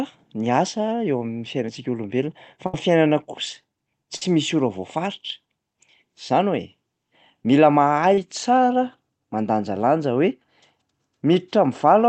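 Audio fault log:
2.66–2.74 s and 4.16–4.22 s, burst of packet loss: about 70 ms then 50 ms never arrived, so the last sound was stretched and faded before audio resumed, the second time at "misy ora".
7.43–7.45 s and 8.14–8.18 s, short concealed packet loss: 10 ms then 30 ms went missing, and continuing the preceding sound to fill each hole left a brief smear or wobble.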